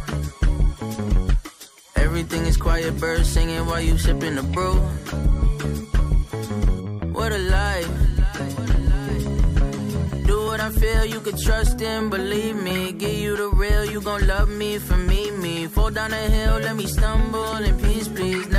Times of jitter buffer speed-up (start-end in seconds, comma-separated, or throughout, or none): none